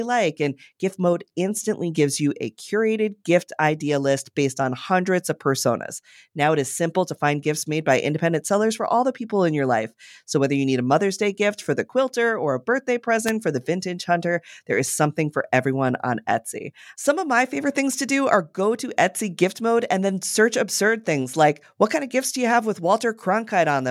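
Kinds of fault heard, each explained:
Wireless microphone noise hit: A brief burst of static cuts across the speech at 13.26 to 13.31 s, lasting about 50 ms. It sounds like a quick swish. The cause is the radio link of an analogue FM microphone dropping out for a moment. Reflected signals cancel the direct one at the receiver. The signal fades, and receiver noise rises. Then the signal recovers.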